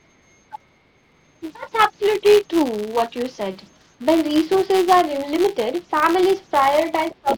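A speech recording running about 7 seconds, with a faint high whistle near 7 kHz hanging in the pauses and a grainy hiss under the quieter syllables, at about 27 dB below the speech. This is converter idle tones: a delta-sigma converter running without dither settles into repeating bit patterns whenever its input is small, and those patterns come out as a steady tone rather than random noise. Under everything there is also a steady 188 Hz buzz that rises and falls with the speech level, like a fine rasp riding on the speech. That is a filter restarted on every block. The filter throws away its memory at each block boundary and starts again from silence, leaving a small transient at the start of every block. The 188 Hz repetition fits a 256-sample block, and because each transient scales with the signal, the buzz tracks loudness. Between 0.52 and 1.45 s, between 3.99 and 4.04 s, and again from 7.1 s to the end at 7.37 s, the speech dips, thins out or breaks into pieces. 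The drops reach about 10 dB and 5 dB in the first two spans and roughly 20 dB in the last, each totalling no more than a fraction of a second. This is speech suppressed in double talk, likely an echo canceller that could not tell the talker from the incoming far-end audio while both were active and turned everything down. A second, fainter voice also comes through. There are brief scraps at 2.04 to 2.15 s and 3.66 to 3.71 s, buried far down, and a sustained stretch from 4.95 to 7.36 s only about 10 dB under the main speech. This is the other side's voice leaking through, likely loudspeaker playback reaching the microphone and left behind by incomplete echo cancellation.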